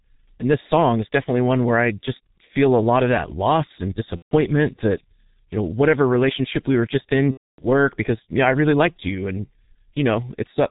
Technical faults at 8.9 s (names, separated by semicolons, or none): G.723.1 codec